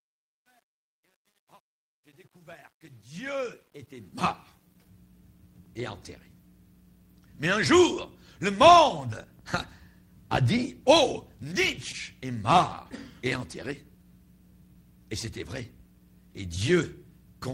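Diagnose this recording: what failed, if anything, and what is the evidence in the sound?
Truncation distortion on a fade, at the digital gain stage. From 0.0 to 4.88 s the quiet fade sounds gritty, worst until 3.61 s. Undithered steps fit a 10-bit word.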